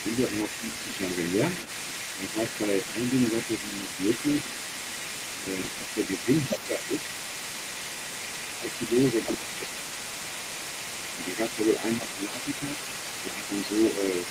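A second, fainter voice runs under the speech for the whole clip, roughly 10 dB down. This is the other side's voice leaking through, likely loudspeaker echo the canceller failed to remove. At 2.2 to 2.37 s the speech dips slightly, then sinks by up to about 15 dB from 5.41 to 6.91 s. This is speech suppressed in double talk, likely the canceller turning everything down while both sides talked. From 5.62 to 5.84 s a gritty crackle rides on that dip, and it returns from 9.21 to 9.78 s. This is processor overload crackle: many short buffers, fitting about 5 ms each, were skipped outright. Shallower dips of about 5 dB follow at 11.25 to 12.72 s and 13.31 to 13.8 s, again from the same double-talk suppression.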